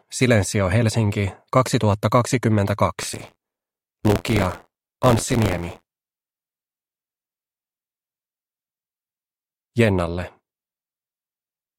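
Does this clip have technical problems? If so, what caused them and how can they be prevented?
Yes. Buffer tearing from 3.00 to 8.31 s: an 86.1 Hz robotic buzz. Each 512-sample-like period holds roughly a tenth of audio about 40 ms old. Keep writer and reader pointers apart with adequate buffering.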